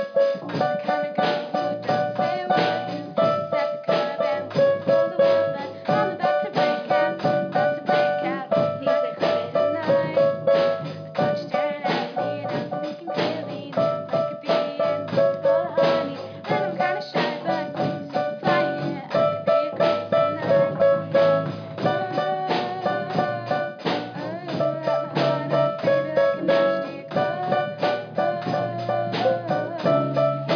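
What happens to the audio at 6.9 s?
Nothing goes wrong at 6.9 s; the audio plays through that moment intact, with no dropout, click or other fault.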